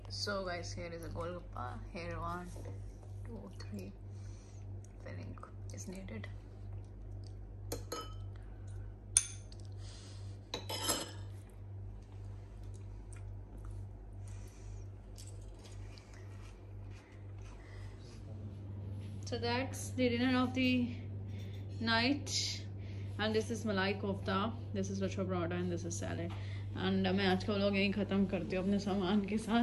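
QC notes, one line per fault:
No faults heard.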